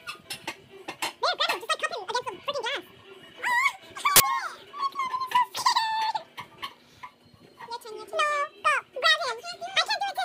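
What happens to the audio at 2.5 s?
Nothing goes wrong at 2.5 s; the audio plays through that moment intact.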